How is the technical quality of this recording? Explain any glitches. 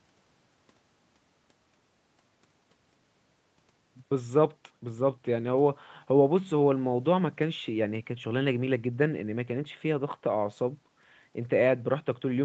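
No glitches can be heard in the speech; the recording simply carries the ordinary marks of a call connection, with the microphone processing trimming the lowest bass and the call codec leaving nothing above 8 kHz, which fits a wideband Opus setting.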